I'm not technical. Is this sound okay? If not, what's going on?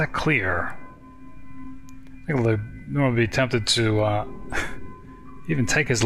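Yes, this sound is okay, and there's nothing going on with it that needs fixing.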